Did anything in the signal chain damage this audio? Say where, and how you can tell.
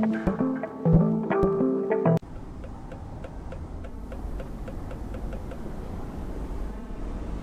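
Yes. The damage happened at the radio receiver, before anything reached playback. At 3.72 s the sound cross-fades over about 436 ms into an FM copy of the same station. This is digital radio blending to analogue. The receiver lost the digital stream and fell back to FM. A hiss floor comes up, roughly 40 dB below the signal, and the level drops by about 1 dB. The FM path stays in until 7.07 s, when it blends back.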